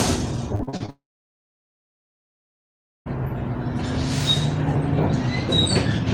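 A recording of everyday sounds. From 0.55 to 0.90 s, repeated packet loss leaves five gaps, none over 38 ms, patched by extending earlier audio, so nearly half that stretch turns choppy and robotic. From 0.90 to 3.08 s, a likely long network dropout means about 2.16 s never arrives; a brief fading fill gives way to roughly 2.06 s of silence before sound resumes with that section missing.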